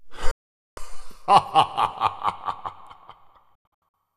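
At 0.31 s the sound cuts to silence almost instantly, with a fade of about 3 ms, and stays gone until 0.78 s. Near the end, from 3.55 s to 3.97 s, it breaks into several short holes. They total about 264 ms, and the longest gap is 96 ms. Both are digital broadcast dropouts: the receiver stopped getting valid frames and muted until good ones arrived. The gap lengths point to runs of roughly 24 ms frames, and the sound sent during the gaps is lost.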